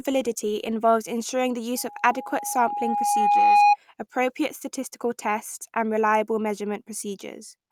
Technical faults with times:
1.76-3.77 loudspeaker feedback squeal

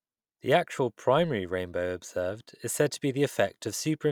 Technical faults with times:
none

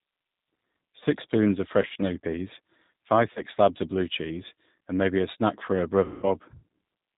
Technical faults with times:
0.00-7.18 G.729 codec
1.82-1.97 VoIP packet loss concealed by the speech codec
3.33-3.41 VoIP packet loss concealed by the speech codec
6.04-6.27 VoIP packet loss concealed by the speech codec

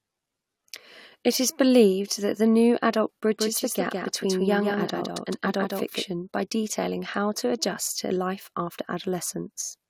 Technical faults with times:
3.38-6.04 doubled audio track

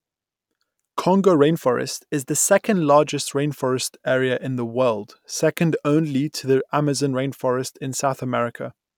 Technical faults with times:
1.53-2.74 drift correction step

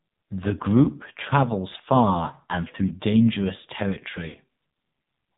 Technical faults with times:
0.00-5.38 AMR narrowband mobile codec
4.28-4.37 lost AMR speech frames

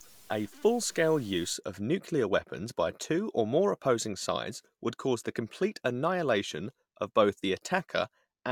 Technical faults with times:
0.00-1.54 stuck bit

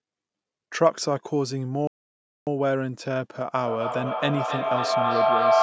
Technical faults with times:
1.87-2.47 playback stall
3.65-5.63 feedback howl

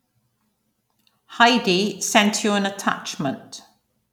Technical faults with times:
none

